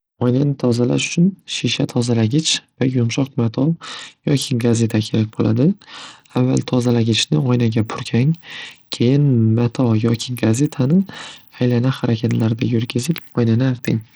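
Throughout the speech, the treble flickers and thins while a gritty, aliased noise rides on the sound, likely Bluetooth SBC compression starving the upper sub-bands at a low bitrate, around 80 kbps.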